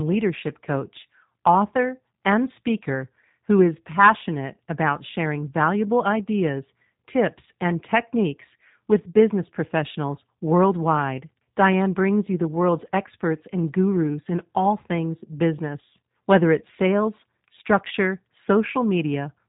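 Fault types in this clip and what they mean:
G.729 codec: the speech has been rebuilt frame by frame from a vocal tract model, a pitch guess and a few pulses, so it sounds plainly rough and synthetic, with nothing above 3.8 kHz. The sound fits an 8 kbit/s G.729 call link.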